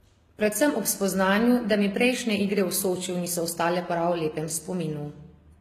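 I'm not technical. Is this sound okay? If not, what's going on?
No. Transcoding between lossy codecs runs through the whole speech clip: it likely passed through two compression formats in turn, stacking their smearing and removing everything above 14.9 kHz.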